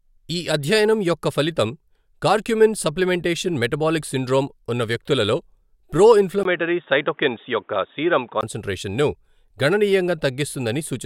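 Speech that turns dull and boxy from 6.43 to 8.43 s, just after "సిండ్రోమ్ ఉన్న వ్యక్తులలో ప్రో", likely an input switched to a poorer device. A spectrogram shows everything above 3.8 kHz vanishing, a 20 ms gap at the switch, and a faint new noise floor, with the waveform level barely changed.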